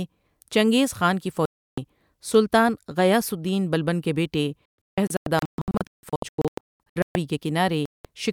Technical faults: digital broadcast dropout

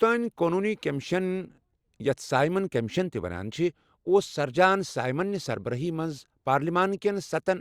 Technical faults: none

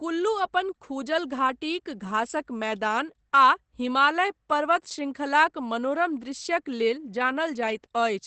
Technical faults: Opus compression

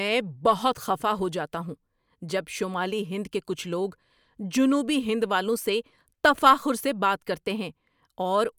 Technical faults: none

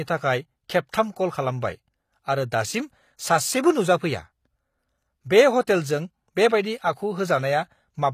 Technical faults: HE-AAC compression

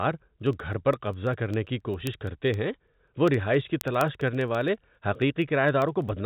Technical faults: word clock ticks

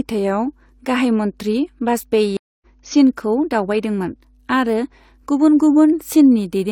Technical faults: mains hum; stream reconnect

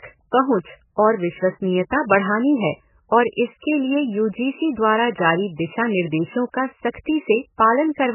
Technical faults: MP3 compression; pre-echo

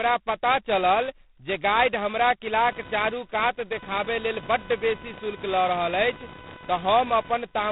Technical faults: G.726 ADPCM; computer activity noise

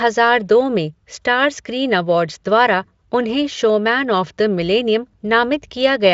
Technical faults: none

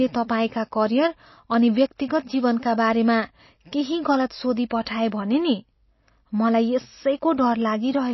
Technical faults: MP3 compression; pre-echo

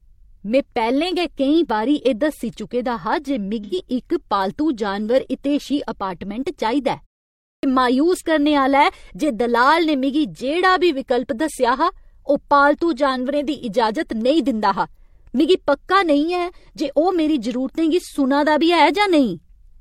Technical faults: AAC frame loss with concealment; clipped start after a pause

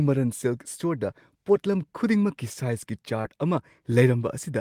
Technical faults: short concealed packet loss

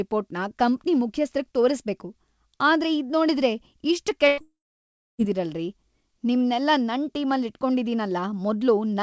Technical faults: burst of packet loss; long network dropout

